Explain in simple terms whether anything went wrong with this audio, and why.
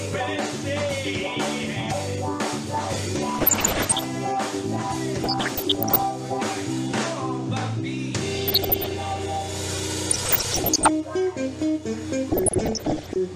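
Weak digital radio reception let corrupted data slip past error correction, causing DAB burbling. Parts of the sound pick up short blips of noise at 3.34–4.06, 5.24–6.07, 8.32–8.95, 10.11–10.89 and 12.32–13.16 seconds.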